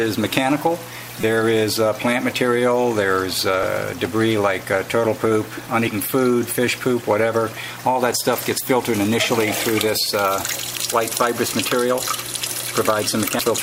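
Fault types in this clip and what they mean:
Damaged data in a compressed stream: Some bytes of the encoded audio are corrupt. The decoder misreads those frames and loses sync until it finds a valid frame header. Here it causes brief blips, at 1.21 to 1.24 s, 10.77 s and 13.39 s.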